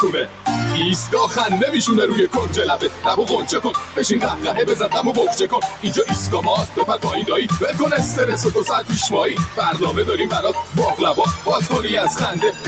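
A noise suppressor built for speech stays active across the whole clip. It reads sustained tones and decaying tails as noise, so the level pumps by around 10 dB and the sound thins out.

At 0.25–0.46 s, 2.85–3.04 s, 3.77–3.97 s and 5.67–5.84 s, the sound is cut by the noise suppressor. It pulls the sound down by about 8, 7, 8 and 8 dB for roughly 150 to 200 ms each time, leaving brief dips.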